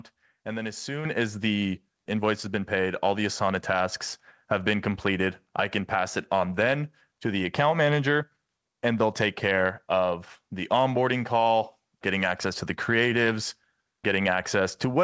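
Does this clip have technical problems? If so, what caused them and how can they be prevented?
Yes, there are three kinds of fault in this speech clip.

Microphone volume stepped up: at 1.05 s, right after "and then as", the call software judged the microphone too quiet and raised the device's input gain in a single step. Voice and background jump together by about 7 dB just before "as the", which makes it sound like an abrupt fader move rather than the talker speaking louder. To prevent it, disable automatic input gain control in the call software, or set the microphone level correctly before the call.

Skip ahead: at 2.06–2.08 s, just after "as the", roughly a second of audio was discarded while later audio was already queued. This happened either in transit or because the jitter buffer overflowed. Playback lurches forward with no gap or fill, so the two sides of the cut are spliced almost directly and the missing stretch simply never plays. 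To prevent it, give the receiver a jitter buffer large enough for the network's delay bursts, and keep the path stable enough that packets do not pile up.

Jitter buffer speed-up: from 2.16 to 3.81 s and again from 4.45 to 6.41 s, ending before "then to the account", the buffer held more audio than its target. It trimmed the excess by repeatedly cutting out short pitch-period-sized pieces. Roughly a tenth of a second goes in the first stretch and around 150 ms in the second. The speech runs about 7% and 6% fast at unchanged pitch and sounds hurried. To prevent it, reduce network jitter so that delayed packets do not arrive in bunches that overfill the buffer.

The audio passed through a wideband call codec with nothing above 8 kHz, which fits G.722 at 64 kbps.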